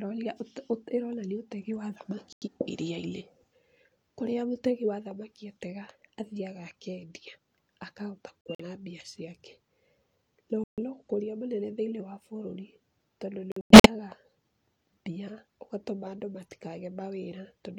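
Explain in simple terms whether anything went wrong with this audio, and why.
Corrupt frame muted, four times: 2.33 to 2.48 s after "ũte ĩronania ũtegi wa"; 8.41 to 8.64 s, between "atega athiaga akendia akahota" and "mbia ciake"; 10.64 to 10.79 s; and 13.52 to 13.90 s after "wa bũrũri tondũ". Damaged pieces of the compressed speech were rejected by the decoder, so the player dropped in abrupt silence instead, without shifting the timing.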